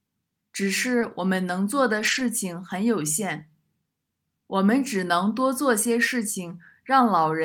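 At 0.99 to 1.03 s there's a short concealed packet loss: about 20 ms of the call arrived too late, and the receiver papered over it by extending the preceding sound before blending back in. You hear it as a quick smear or wobble.

Overlapping the end of that, from 1.01 to 1.03 s, is a lost packet rebuilt from error correction. This one is a single 20 ms stretch that the decoder rebuilt from the low-bitrate backup copy carried in the next packet. It's brief and rougher. There's a longer run from 1.99 to 2.21 s, 120 ms in total, which is six separate packets rebuilt the same way. There's no gap, but that patch sounds grainier and noisier than the audio around it.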